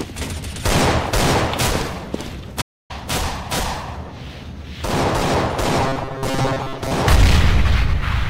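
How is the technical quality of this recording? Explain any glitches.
Two glitches stand out in this recording.

At 2.61 s there's a playback stall: the audio cuts out for about 280 ms, likely because the player ran dry or blocked, then carries on.

From 5.82 to 6.92 s there's robotic sound from repeated short buffers: a fixed 134 Hz metallic buzz, likely from looping roughly 7.5 ms chunks while about half the real audio gets skipped.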